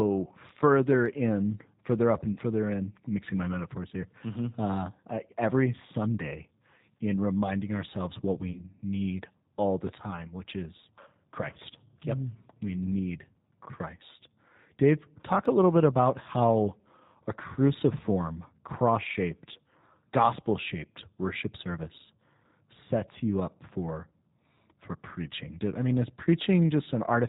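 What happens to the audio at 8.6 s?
Around 8.52 to 8.61 s the speech is briefly stretched into a sustained buzzy tone or coloured noise that fades, and it stays weak or distorted for a short stretch once normal decoding resumes. This is VoIP packet loss concealed by the speech codec. About 30 ms of audio went missing, which points to a single lost packet. The decoder filled the gap by extending its last pitch and filter settings at falling gain. Because each frame builds on the one before, the speech takes a moment to recover after the gap.

Underneath this, as across the whole clip, plainly audible G.729 codec damage gives the speech a rough, synthetic quality and removes everything above 4 kHz. The sound fits G.729A at 8 kbit/s, which rebuilds speech from a vocal tract filter, a pitch predictor and a few pulses per 10 ms frame rather than sending the waveform itself.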